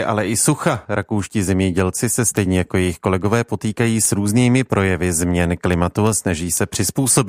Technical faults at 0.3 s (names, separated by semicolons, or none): word clock ticks